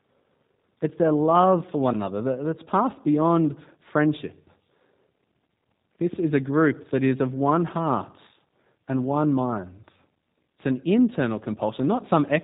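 G.729 codec damage runs throughout: speech is rebuilt from a vocal tract model and sparse pulses, sounding plainly rough and synthetic, with nothing above 3.8 kHz.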